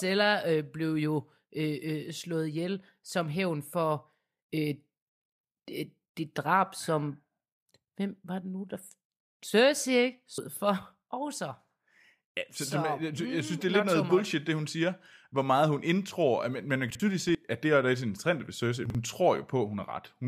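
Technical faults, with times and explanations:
10.29 to 10.57 s, compressed frames skipped: the speech jumps forward, dropping about a fifth of a second of audio that the decoder never played.
16.90 to 17.00 s, chunks out of order: just after "men man", one 46.44 ms block plays one slot late. Nothing is lost, but the sound is briefly jumbled, with three hard joins.
17.16 to 17.35 s, compressed frames skipped: roughly a tenth of a second drops out just before "at det er der".
18.86 to 18.95 s, chunks out of order: another 46.44 ms block arrives one slot late, giving a short garbled moment.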